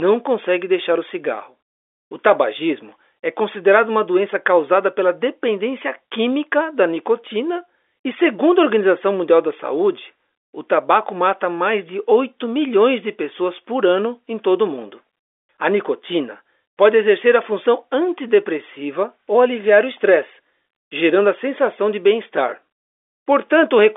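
Nothing stood out on listening to this speech recording; it sounds like an ordinary telephone-line call carried over G.711 coding.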